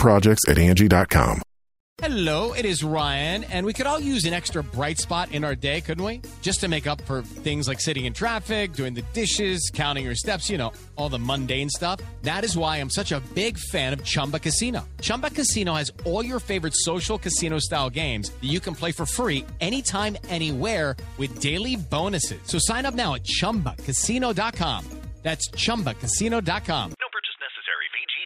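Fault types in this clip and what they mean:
No technical faults can be heard anywhere in this clip. There is nothing to list for it under any fault type.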